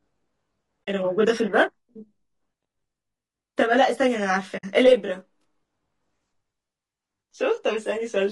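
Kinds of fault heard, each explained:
Channel delay (comb filtering): One channel runs about 20 ms behind the other, and summing them to mono cancels shared content at evenly spaced frequencies, starting around 30 Hz. That leaves the voice rough and slightly doubled all the way through.
Low-delay AAC compression: The speech sounds rough and grainy throughout, with noise filling the gaps between harmonics. The likely cause is AAC-ELD at roughly 32 kbps, where the short frames can't resolve the voice's harmonic detail at that bit budget.
AAC frame loss with muting: The decoder zeroed out missing frames, so the sound fades into a soft-edged hole and back again. This happens at 0.84 to 0.88 s (40 ms, about two frames) and 4.57 to 4.64 s (60 ms, about three).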